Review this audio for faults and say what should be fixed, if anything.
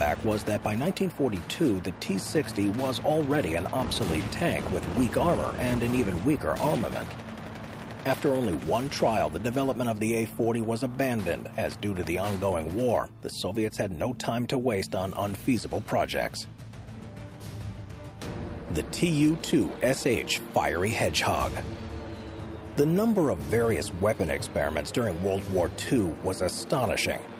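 Nothing in this audio needs to be fixed, as no faults can be heard.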